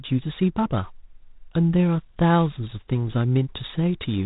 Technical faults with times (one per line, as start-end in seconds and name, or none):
0.00-4.25 G.726 ADPCM